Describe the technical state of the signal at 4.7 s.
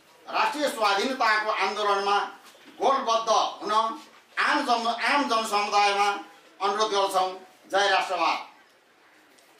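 At 4.7 s the signal is intact, with no audible dropout, distortion, clipping or other technical fault.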